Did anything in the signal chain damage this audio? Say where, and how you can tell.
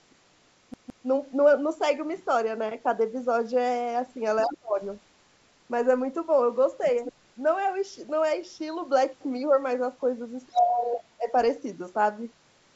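Yes. From 0.74 to 1.06 s a 163 ms slice repeats twice with a tiny mute at each jump. That's a CD stuck on one turn, a playback fault.

The other side's voice is leaking through at 4.38 to 4.57 s (about 15 dB down), 6.83 to 6.91 s (about 25 dB down) and 10.47 to 10.79 s (roughly level with the talker). That's likely residual echo the call's canceller missed.

Speech is suppressed in double talk at 4.46 to 4.79 s, dipping about 35 dB, and at 10.53 to 11.29 s, about 20 dB down. The canceller likely ducked everything while both sides overlapped.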